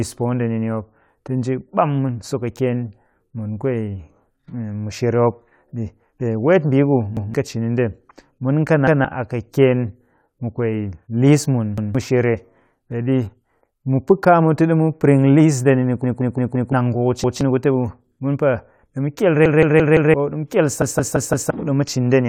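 Repeated buffer at 7.17, 8.88, 11.78 and 17.24 s, each stuttering once over about 0.17 s. At 16.04–16.73, 19.46–20.14 and 20.82–21.50 s it repeats four times, a fit for an 8192-sample buffer. Audio arrived late, so the speech replays the last chunk with hard joins and loses up to well over half a second.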